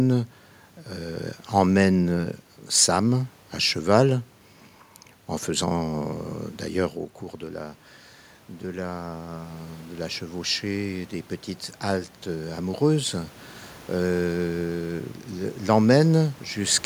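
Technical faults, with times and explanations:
8.63–11.18 s, automatic gain rising: the input dropped about 11 dB, so the gain climbs about 5 dB. The waveform envelope and the spectrogram noise floor swell together, slowly.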